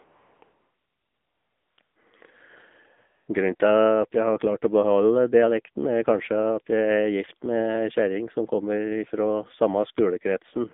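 AMR narrowband mobile codec damage runs through the whole speech clip. The sound is confined to roughly 200 Hz to 3.6 kHz with nothing above, and the voice has a plainly buzzy, synthetic edge, which fits a low rate around 7.4 kbps, where the vocal-tract model gets very few pulses per subframe. AMR comfort noise appears at 0.04–0.42 s, 0.44–1.78 s, 1.82–1.96 s, 2.98–3.28 s and 3.56–3.60 s. In each pause the sender stopped transmitting speech frames, so the receiver filled the gap with smooth, steady synthetic noise that switches in and out against the real background.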